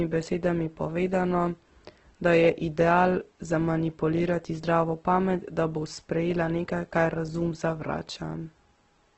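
Right through the speech it sounds rough and grainy, with nothing above 8.1 kHz, likely Opus compression squeezed to a very low bitrate, around 12 kbps.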